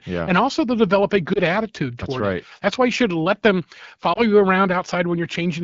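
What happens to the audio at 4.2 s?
A lost AMR speech frame, a single 20 ms frame, failed its checksum, so the AMR-WB decoder concealed the gap by reusing the last good pitch and vocal tract settings at lowered gain. The result is a brief dip or warble from 4.13 to 4.20 s.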